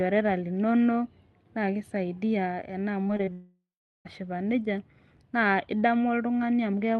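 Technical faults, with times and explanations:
3.07–3.11 s, 3.17–3.21 s and 3.25–3.29 s: short concealed packet loss. Right after "linonok naake isaidia ena", three roughly 20 ms chunks never arrived in time. The receiver patched each by extending the preceding sound, so you hear quick smears and wobbles in a row.
3.33–4.07 s: long network dropout, likely an upstream network stall. About 0.72 s of audio went missing. The decoder first stretches the last sound into a fading buzz or hiss, then gives up into about 0.41 s of silence, and speech resumes at "neija naa" with that stretch simply gone.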